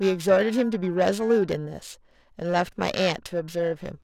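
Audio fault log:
throughout: periodic clock jitter. The converter clock is being shaken at around 1 kHz, so every component of the speech gains sidebands roughly 1 kHz above and below it, strongest on higher-frequency content. This gives a rough, metallic edge that disappears in pauses.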